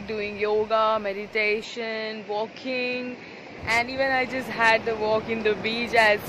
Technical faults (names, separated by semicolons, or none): input switched to a poorer device